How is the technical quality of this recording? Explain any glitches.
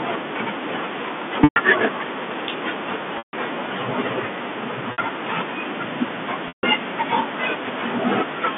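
Four short dropouts interrupt the speech, which is carried over G.711 telephone coding with its 200 Hz to 3.5 kHz line band.

Packet loss with pitch repetition occurs at 1.44 s (120 ms), 3.18 s (150 ms), 4.92 s (60 ms) and 6.48 s (150 ms). The receiver loops the last pitch period across each gap. At 4.92 s this sounds like a briefly held, buzzy tone. The longer gaps fade toward silence before speech cross-fades back.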